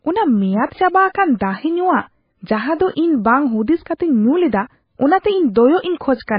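Heavy MP3 compression, likely at a very low bitrate around 18 kbps, runs throughout: treble is cut above 5.1 kHz and sparse spectral lines flicker, making the speech watery and swirly.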